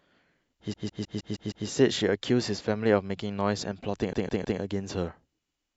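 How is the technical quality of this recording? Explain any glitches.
The recording is marred by two stutters. Repeated frames occur from 0.72 to 1.66 s and from 4.12 to 4.59 s: a 157 ms block of compressed speech, which fits a run of six frames, was sent again, replaying six times and then three times. Each repeat jumps back audibly, adding 0.94 s and 0.47 s.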